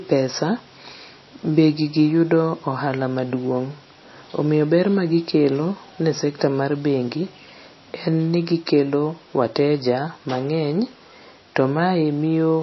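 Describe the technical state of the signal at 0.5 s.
At 0.5 s the speech carries the same damage heard across the whole clip: nothing above 5.8 kHz, and a watery, swirling texture on sibilants, consistent with MP3 compression. This is likely a low-bitrate encode, around 24 kbps, where the encoder imposes a hard treble cut-off and drops weak frequency lines that flicker on and off between frames. The artefacts are plainly audible, with dulled consonants and smeared onsets.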